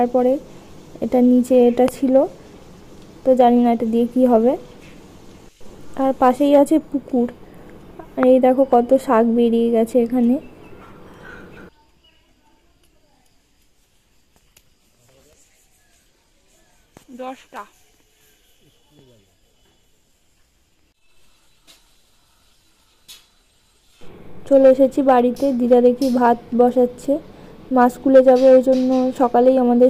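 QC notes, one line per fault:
1.88–1.90 s and 8.23–8.25 s, loud pop: each is a single sharp pop lasting about 20 ms that jumps well clear of the surrounding audio, peaking roughly 10 dB above it, while the sound carries on unbroken beneath. The likely cause is a brief voltage step or pulse entering the signal path, from a plug, switch, static discharge or driver glitch, which the following circuitry shapes into that short percussive burst.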